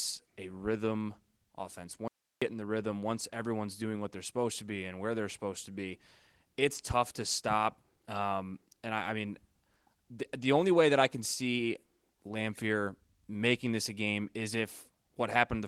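Speech that drops to bare hiss for about a third of a second, from 2.08 to 2.42 s, between "a rhythm offense" and "in the rhythm once", with only a faint residue roughly 50 dB below the voice. This is an audio dropout to a faint residue, likely a brief loss of signal while the downstream path stayed live.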